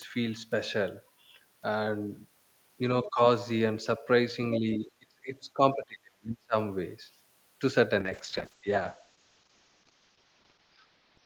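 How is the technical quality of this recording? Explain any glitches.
The recording has three kinds of call-processing glitches.

Other side's voice leaking through, 3.03 to 3.09 s: a brief scrap of a second voice, about 15 dB under the talker, is audible, likely residual loudspeaker echo the canceller missed.

Speech suppressed in double talk, 3.04 to 3.2 s and 4.59 to 6.55 s: the talker's level dips by about 15 dB, then by about 30 dB for roughly one and a half seconds, likely as the canceller turns down both voices.

Call bitrate drop, 8.01 s to the end: the encoder rate falls from 48 to 8 kbps and bandwidth narrows from 20 kHz to 6 kHz, leaving the speech muffled and rough.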